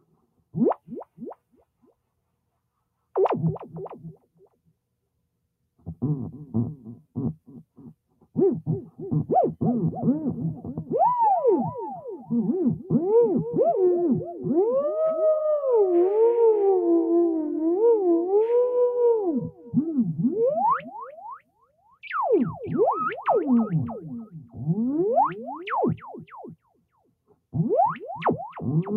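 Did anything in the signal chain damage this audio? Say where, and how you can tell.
Yes. Sound cut by the noise suppressor in the call-processing stage at 0.0–0.54, 4.17–4.72, 19.5–19.73 and 21.39–21.95 s: the suppressor judged parts of the sound to be noise and pulled them down by about 14 to 18 dB, dips lasting a few tenths of a second.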